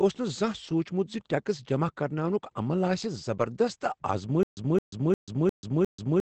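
From the start, Opus voice compression running in its SILK speech mode at a low bitrate, consistent with roughly 12 kbps, codes the excitation coarsely and caps the band near 8.6 kHz, so the speech sounds muffled, hoarse and faintly robotic throughout.

From 4.43 s to the end comes a stutter with silent gaps, likely a stalled stream replaying its last fragment at each retry: a 216 ms burst repeats five times, each followed by about 137 ms of digital silence, every 354 ms, while the audio due there is lost.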